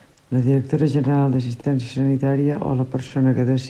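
Throughout the clip there is clock drift between sender and receiver. The sender's clock runs slower, by roughly 2 percent, so the jitter buffer keeps draining and the receiver has to repeat short pieces. This produces small, unevenly spaced timing hiccups in the speech.

A short stall from a late packet occurs three times, at 0.13 to 0.19 s just before "la directora general", at 1.60 to 1.66 s just after "la directora general", and at 3.07 to 3.13 s. Each time, the buffer ran empty and about 30 ms of sound was stretched until the packet arrived. Nothing is lost, but the held sound carries a brief buzz or dip.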